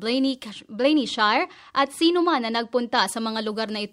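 From 0.52 to 2.95 s there's de-emphasis applied wrongly: a treble-cut filter meant to undo pre-emphasis got used where there was nothing to undo, so the top end rolls off smoothly, about 8 dB down at 10 kHz versus 1 kHz. It sounds dull and muffled.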